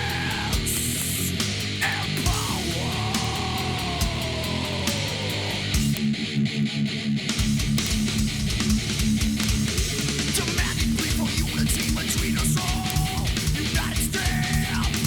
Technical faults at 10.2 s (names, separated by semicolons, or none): word clock ticks